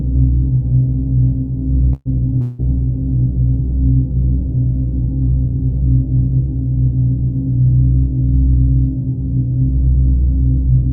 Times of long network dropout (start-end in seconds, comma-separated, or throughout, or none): 2.41-2.62